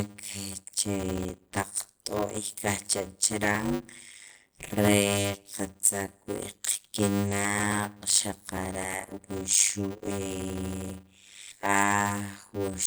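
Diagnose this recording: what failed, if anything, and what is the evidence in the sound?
Block size mismatch (padded) in driver buffer: short zero-filled writes give a 100 Hz buzz throughout and 0.53x speed with timbre intact; waveform shows periodic silent gaps.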